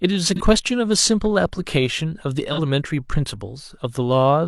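AAC frame loss with concealment at 0.36–0.41 s and 2.53–2.59 s in this speech: each gap, about 43 ms, fits one lost frame, patched from the previous spectrum as a brief smeared, phasey blur.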